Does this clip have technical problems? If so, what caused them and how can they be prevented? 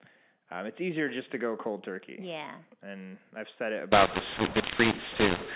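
Yes. From 3.92 s to the end of the clip at 5.55 s, the speech turns harsh and gritty and the gaps between sounds fill with hiss. This is a mu-law and A-law mix-up: the audio was encoded as G.711 mu-law but decoded as A-law. Because the two laws map 8-bit codes to different points on their logarithmic curves, some levels come out too loud and others too quiet, and near-silent samples are lifted to an audible noise floor. Before 3.92 s the mu-law coding decodes correctly, bandlimited below 4 kHz. To prevent it, signal the G.711 variant explicitly in the session negotiation or file header, and check that encoder and decoder agree on mu-law or A-law.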